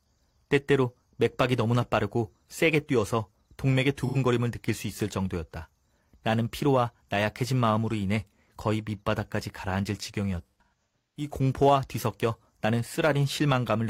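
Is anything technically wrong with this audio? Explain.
Yes. AAC frame loss with concealment occurs twice. At 4.06 to 4.17 s, an 85 ms gap (about two frames) is patched from the last good spectrum, leaving a smeared, phasey blur. From 10.47 to 11.30 s, scattered losses totalling 512 ms, with runs up to about 150 ms, dip toward silence and fade back.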